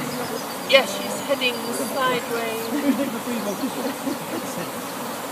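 No technical faults are audible.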